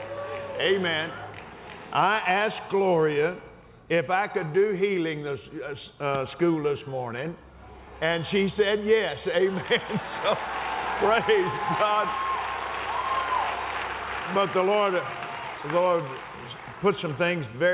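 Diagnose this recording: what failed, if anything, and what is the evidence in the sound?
Nothing failed: the sound shows no evidence of a fault, and its missing content above 4 kHz simply fits the narrowband call path it travelled through.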